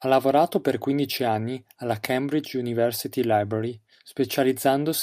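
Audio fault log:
No fault is logged for this speech clip.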